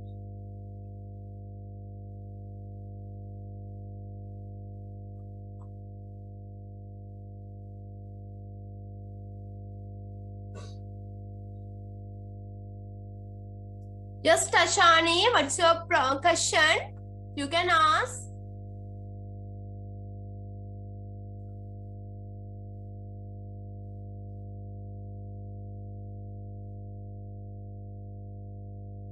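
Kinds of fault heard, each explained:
Mains hum: a steady low drone at 50 Hz sits under the sound for the whole clip, roughly 20 dB below the signal. It comes from the power line leaking into the signal path, through a ground loop or a nearby transformer.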